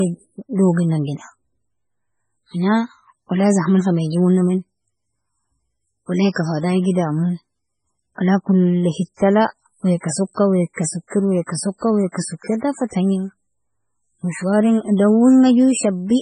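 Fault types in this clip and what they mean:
Low-bitrate audio saved at a high bitrate: the speech stops dead at 9.9 kHz and keeps the artefacts of its first encoding, likely a very low-bitrate MP3 re-encoded high, which can't restore what was lost.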